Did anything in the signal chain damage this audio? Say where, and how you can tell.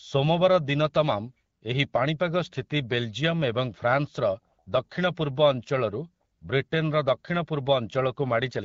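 No, the chain shows no damage: the speech goes through the AMR wideband (HD Voice) codec at 12.65 kbit/s, a rate at which it keeps speech clear, leaving only the light coding character that codec imparts.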